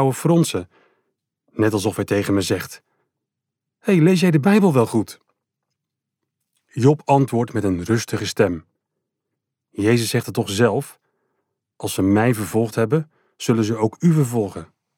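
No dropouts, clipping, glitches or other transport or processing faults can be heard anywhere in the clip.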